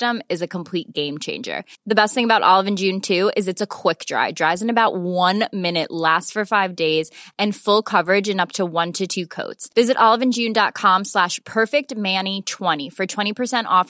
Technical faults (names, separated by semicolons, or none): none